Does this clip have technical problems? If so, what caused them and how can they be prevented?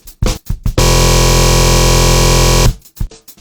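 Yes. Throughout the clip a full-band copy of the sound trails the original by about half a second, a few dB quieter, with no decay or room colour. This doubled audio track is likely caused by a second, slower capture path feeding the mix. On a waveform it shows as a repeated envelope offset in time. Prevent it by routing each source through only one monitored path.

Damaged data in a compressed stream causes brief glitches from 0.33 to 0.39 s and from 3.07 to 3.12 s, where the decoder misreads corrupted frames and resyncs. Spectrograms show short broadband smears with abrupt edges. Use checksummed transport and keep metadata out of the audio payload.

From 0.81 to 2.66 s a system hang loop repeats a 23.22 ms slice exactly, which fits a 1024-sample buffer, producing a buzz at 43.1 Hz. The spectrogram shows rigid vertical striping, and the waveform shows an identical repeating cycle. Prevent it with stable drivers and a watchdog that mutes the output when the buffer stops updating.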